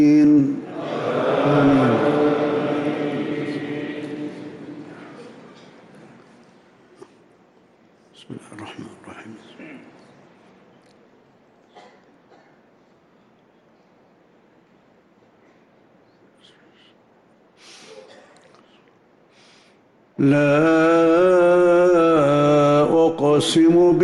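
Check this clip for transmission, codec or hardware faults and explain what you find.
No transmission, codec or hardware faults are audible anywhere in the clip.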